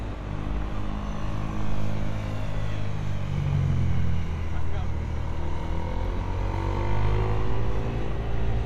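No technical faults can be heard anywhere in this recording of sound. Nothing in it stands out as a problem at any point along its length.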